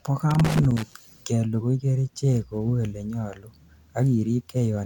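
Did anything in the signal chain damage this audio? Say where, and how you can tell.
Yes. Between 0.31 and 1.01 s the speech is broken up by an irregular burst of crackle and scratchy clicks, lasting about 0.7 s before the signal returns clean. This is loose connector crackle in the analogue wiring: a worn or dirty contact was making and breaking as it moved, chopping the signal on and off in rapid, uneven bursts, with any DC on the line turning each make or break into a pop.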